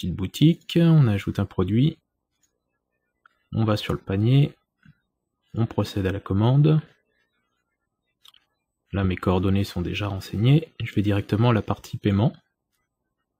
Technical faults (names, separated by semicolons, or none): none